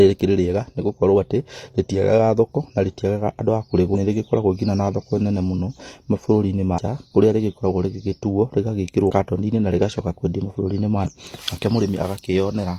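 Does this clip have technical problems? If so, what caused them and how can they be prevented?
Yes. The speech jumps forward twice from compressed frames skipped, at 3.90–3.96 s and 6.74–6.79 s. At each point roughly 0.4 s and then roughly 0.3 s of audio never plays, consistent with several consecutive codec frames of about 46 ms each being lost or rejected by the decoder as corrupt. Verifying file integrity after transfer and using error-protected storage or transport prevents the frame loss.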